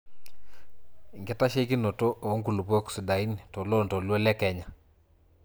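Speech recording with no audible technical faults.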